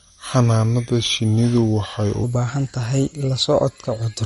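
From the start to 2.24 s, the speech plays at the wrong speed. It runs at 0.814 times its proper rate, so speed and pitch both drop together. The pitch sits roughly four semitones low, and the delivery sounds deep and dragged. The likely cause is a section fitted to the wrong clock during editing or playback. Normal speed returns at 2.24 s, just before "u baahan tahay la".

MP3 compression damage runs through the whole clip, and it is plainly audible. Nothing is present above 11.2 kHz, which fits the fixed treble cut an encoder applies. The sound points to a low bitrate, which fits about 48 kbps. Weak frequency lines drop in and out between frames. That gives a watery, swirly texture, with metallic chirps on s sounds and smeared attacks. Likely cause: heavy MP3 encoding.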